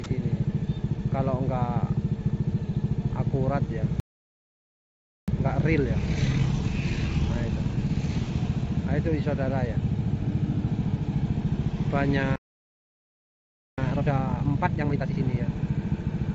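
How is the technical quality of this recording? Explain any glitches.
Two stalls with hurried recovery, plus a very brief dropout at the start, are the main problems; the call-codec path limits everything to below 8 kHz, which fits G.722 at 64 kbps.

At about 0.04 s, a sound dropped by the voice detector: the sender's activity detector likely judged the opening as background and stopped transmitting, so the receiver filled in comfort noise. For roughly 20 ms the audio is replaced by that comfort noise.

Playback stalls occur from 4.00 to 5.28 s and from 12.36 to 13.78 s. The player likely ran short of buffered data or was blocked. The output goes silent mid-flow for about 1.3 s and then 1.4 s before resuming.

Time-compressed catch-up follows each stall, from 5.28 to 8.28 s at 1.15 times speed and from 13.78 to 15.20 s at double speed. The player drains its backlog by cutting and cross-fading short segments, so the audio rushes at unchanged pitch.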